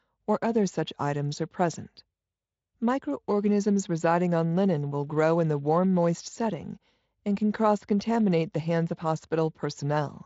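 Nothing goes wrong anywhere in this speech recording, and the only audible trace of its Speex coding is that the top end simply stops at about 7.7 kHz.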